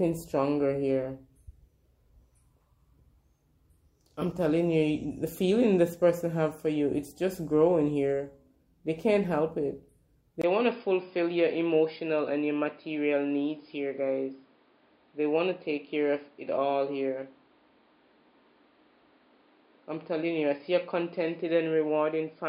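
At 10.42 s the audio drops out for about 20 ms and then comes back noticeably duller and a bit quieter, staying that way to the end. Nothing reaches above 5.1 kHz from there on, and there's a new, faint background noise underneath. That pattern likely means an input switched to a poorer device mid-recording, perhaps a headset's call profile, bringing its own narrower band, different level and different noise.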